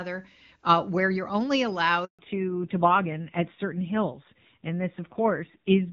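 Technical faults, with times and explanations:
2.05 to 2.19 s, handover gap: The call moved to another network and no speech frames arrived for 140 ms. The sound dies away within a few tens of milliseconds, then stays silent until the new link starts. Whatever was said there is lost.
2.19 s to the end, fallback to narrowband: After the switch, the clear wideband HD Voice sound gives way to an older narrowband codec. Nothing above 4 kHz remains. The speech turns duller and rougher, which fits AMR-NB at 7.4 kbit/s.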